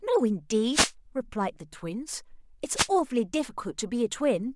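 The radio link from the analogue FM wireless microphone fades twice as reflected signals cancel at the receiver, letting its noise rise over the speech. The first wireless microphone noise hit runs from 0.70 to 0.92 s and the second from 2.74 to 2.88 s. Each one is heard as a short swish of static, then clears once the signal recovers.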